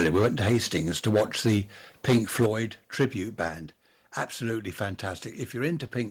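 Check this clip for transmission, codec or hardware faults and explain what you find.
The speech has two related hardware faults: repeated microphone overload, and two sudden step-downs in microphone volume that follow overloads.

Microphone overload occurs four times: 1.06 to 1.58 s, 2.08 to 2.46 s, 3.00 to 3.05 s and 3.40 to 3.47 s. The loudest syllables turn harsh and crackly, worst at 2.08 to 2.46 s. The likely cause is input gain set high enough to drive peaks past the converter's ceiling, by about 9, 14, 6 and 3 dB respectively. The waveform tops are flattened, on roughly a fifth of samples at 3.00 s.

Microphone volume stepped down twice, at 2.46 s and 3.48 s. Voice and background both drop abruptly, by about 7 dB and then about 4 dB. Each drop comes right after an overloaded passage. That timing points to call software that likely detected clipping and cut the device's input volume in a single step instead of easing it down.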